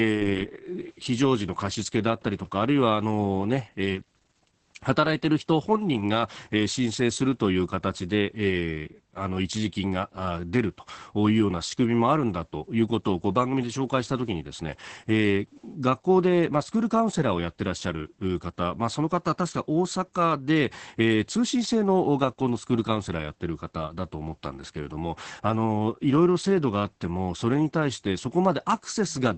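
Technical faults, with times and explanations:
Throughout, Opus voice compression: speech is muffled, hoarse and slightly robotic, fitting a roughly 10 kbps linear-prediction coder; the spectrogram shows nothing above 8.6 kHz and blurred harmonics.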